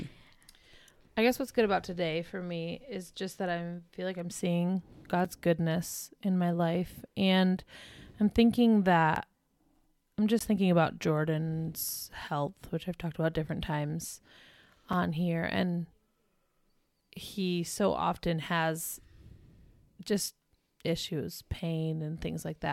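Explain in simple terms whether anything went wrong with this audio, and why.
Yes. The speech has five short dropouts, each a block of digital silence: at 5.25 s (between "feel like I'm seeing" and "goodness in my life"), 9.15 s, 10.39 s (just before "thinking about"), 14.93 s, and 21.54 s (after "just issues"). Each lasts 5 to 16 ms. The sound cuts out and back with no fade, so each one is a tick or a tiny hole. Three of them are 256 or 512 samples long, which fits the program likely failing to fill its output buffer in time.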